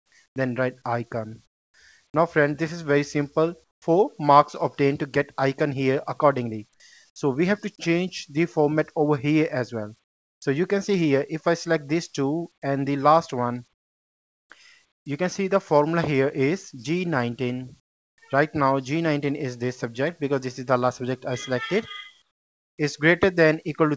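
Right from the start, 0 to 0.36 s, the room background drops out and a flat, featureless hiss sits there instead. That's comfort noise in place of the background, and it comes back at 1.46 to 1.74, 3.64 to 3.82, 10.04 to 10.42, 13.74 to 15.06, 17.8 to 18.18 and 22.22 to 22.78 s. The likely cause is discontinuous transmission: the sender goes quiet when it decides nothing's happening, and the receiver invents smooth noise to cover the gap. You can hear the level drop in most of them, about 18 dB at 1.46 s, about 13 dB at 3.64 and 22.22 s, about 20 dB at 17.8 s and about 24 dB at 10.04 s, so the pauses sound like dead air, not a room.

At 3.8 s, where that third patch ends, the sound comes in with a hard edge and no soft lead-in. That's an onset clipped by the voice detector, likely because the detector was about 20 ms late noticing the sound had started again, so the beginning never got sent and was papered over with the same synthetic hiss. 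Nothing's audible above 8 kHz, which fits a G.722 call path at 64 kbps.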